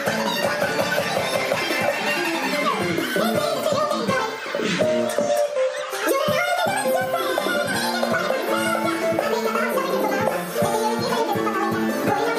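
From start to finish the audio is read two samples at a time, so everything plays at double speed and a full octave (12 semitones) high. Pairs of samples were taken as single frames, halving the duration, and any strong content above a quarter of the sample rate folds back. On a spectrogram all features sit at twice their usual frequency; the waveform looks compressed in time, with events packed twice as tightly.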